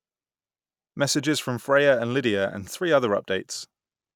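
A short speech recording, with no technical fault to be heard anywhere in it. No times or causes can be given, because nothing goes wrong at any point.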